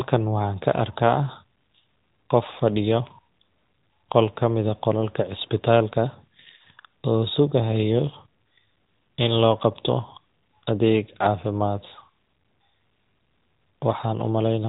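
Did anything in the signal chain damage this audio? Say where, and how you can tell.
Yes. At the codec stage, an AMR narrowband mobile codec runs throughout. The spectrogram is empty above 3.8 kHz, and the pulse-excited speech sounds plainly buzzy, which fits a mode around 10.2 kbps.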